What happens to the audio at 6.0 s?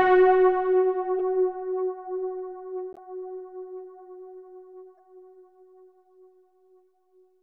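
Nothing goes wrong at 6.0 s; the audio plays through that moment intact, with no dropout, click, glitch or other fault to be heard.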